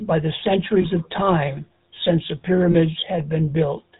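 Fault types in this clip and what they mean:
GSM full-rate codec: The whole clip has a buzzy, gravelly roughness on the speech, with nothing heard above 4 kHz. A vocal-tract model driven by coarsely spaced pulses rebuilds each sound, consistent with the 13 kbps GSM full-rate codec, and the damage is plainly audible.
Lost GSM frames: Brief rough, metallic rings hold the sound in place around 0.82 to 0.86 s and 2.72 to 2.75 s. Each fits a single missing 20 ms frame, filled by repeating the previous good frame's settings.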